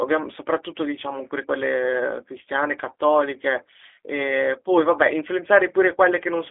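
From start to finish the speech carries G.729 codec damage, plainly audible. The band sits on a telephone line of 300 Hz to 3.5 kHz, with nothing above 3.6 kHz, so sibilants lose their edge. The coder rebuilds each 10 ms frame from a vocal tract filter, a pitch estimate and a few fixed pulses rather than the original waveform, leaving a rough, slightly synthetic texture consistent with an 8 kbit/s G.729A coder.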